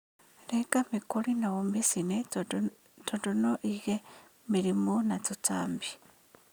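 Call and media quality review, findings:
No audible faults in the speech; nothing to flag.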